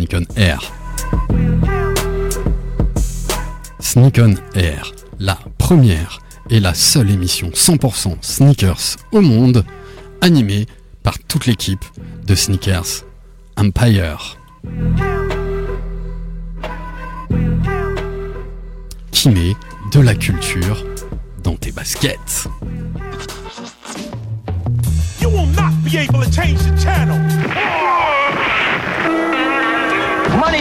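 No technical faults are audible.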